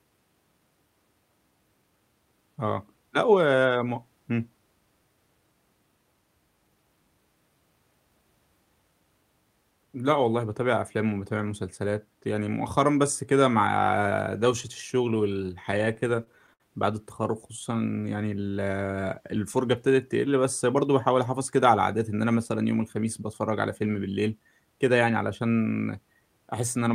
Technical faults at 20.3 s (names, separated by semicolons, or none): none